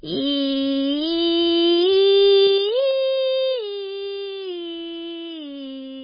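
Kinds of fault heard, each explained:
MP3 compression: The music sounds watery and swirly, with nothing above 5 kHz. This is likely heavy MP3 compression at a very low bitrate, around 16 kbps.
Zipper noise: From 2.42 to 2.97 s, a ticking zip rides on the music as the level drops about 15 dB in unsmoothed 3 dB steps, roughly ten per second.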